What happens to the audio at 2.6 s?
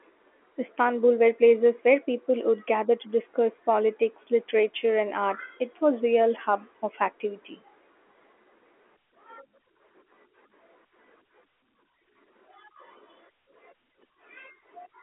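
Nothing goes wrong at 2.6 s: the speech there is intact, carried through the narrow telephone band of the G.711 line without any break or added damage.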